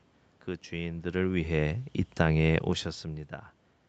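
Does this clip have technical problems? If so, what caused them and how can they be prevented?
Yes. Between 1.11 and 2.72 s, automatic gain falling occurs: the call's gain control judged the input too loud or its background noise too strong and eased its gain down by about 3 dB, so the speech and the room noise behind it sink together. Lower the microphone's input level or disable automatic gain control.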